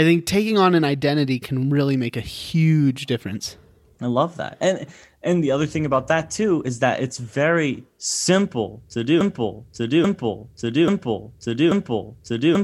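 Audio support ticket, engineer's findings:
Broken-record loop from 9.21 s to end of clip. A 0.84 s fragment of speech repeats exactly, back to back, four times, with no new material after 9.21 s; the remaining audio is lost. Likely cause: player, encoder or stream stalled, re-sending its last buffered fragment until the end of the clip.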